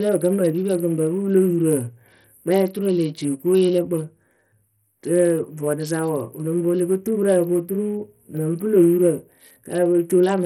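From start to finish the speech carries a gritty, granular roughness, with the upper treble thinning and flickering in and out rather than holding steady, and nothing at all above 18.4 kHz. The damage is heavy, which fits a starved bit pool of around 64 kbps. The likely cause is Bluetooth SBC compression: with so few bits, the codec's top sub-bands go empty or nearly so, and the remaining bands are coarsely quantised, leaving noise and aliasing on the sound.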